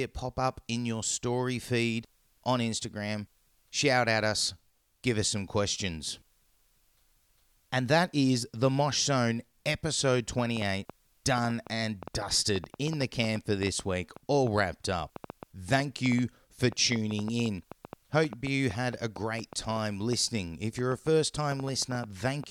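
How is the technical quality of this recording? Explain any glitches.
The recording has one fault: a train of clicks from 10.39 s to 22.45 s, about 5.6 per second at an irregular pace, around seventy in all. They peak a few dB above the speech and tick through pauses too, likely from interference or a faulty connection or power supply.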